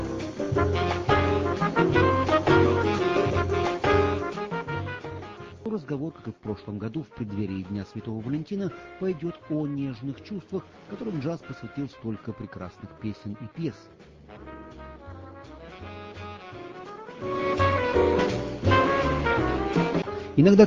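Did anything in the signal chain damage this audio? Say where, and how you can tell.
No, nothing in the signal chain damaged this audio, so there is no stage to point to.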